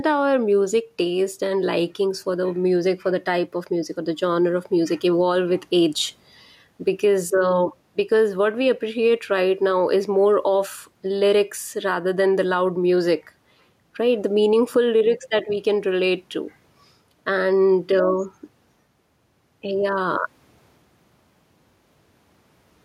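Throughout the speech, the input gain is likely set too high, with a fast limiter pulling it back on each loud syllable. That is gain pumping: the gain swings by roughly 5 dB, squashing loud and soft levels together, over room noise about 45 dB below the speech.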